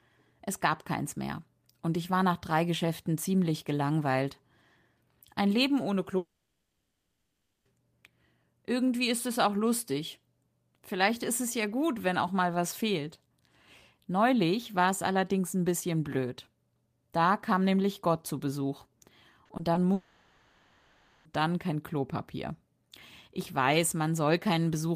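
Long network dropouts at 6.17–7.67 s and 19.93–21.27 s in this speech recording, likely from packets not arriving, replace about 1.5 s and 1.3 s with a fading continuation: the first decays into near-silence, the second never fully goes quiet. Short concealed packet loss at 19.45–19.51 s, 19.57–19.61 s and 19.73–19.77 s bridges 20 to 40 ms gaps with extrapolated sound, giving brief smears just before the second dropout.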